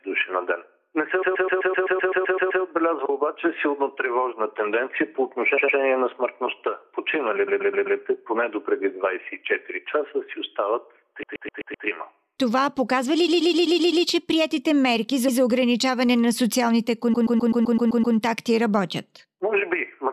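Repeated frames stutter the sound at 1.22 s, 5.57 s, 7.47 s, 11.22 s, 13.27 s, 15.27 s and 17.13 s. A short block of compressed audio, 128 ms long (106.7 ms at 5.57 s), is played again and again, from one extra play at 15.27 s to eleven at 1.22 s. The longest run adds 1.4 s of time.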